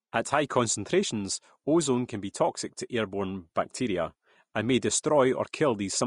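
A low-bitrate encoder most likely squeezed this speech through Vorbis compression from start to finish, with the damage sounding consistent with roughly 37 kbps. To save bits, the codec discarded everything above 10.5 kHz and quantised the remaining treble so coarsely that fine detail was swapped for noise of similar energy. Throughout, the top end sounds hissy and grainy, sibilants lose their crispness, tones take on a rough edge, and consonant attacks blur instead of landing cleanly.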